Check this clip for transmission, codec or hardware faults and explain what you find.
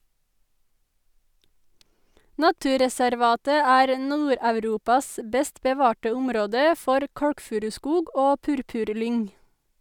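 No transmission, codec or hardware fault is audible anywhere in this speech recording.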